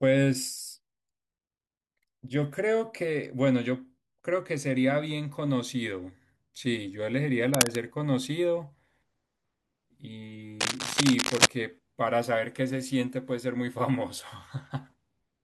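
Speech, with cable scratch noise at 7.54–7.76 s and 10.60–11.47 s: dense, irregular rustling bursts about 5 dB above the speech in the first and roughly as loud as the speech in the second, likely from a worn connector moving, unlike sparse, isolated clicks.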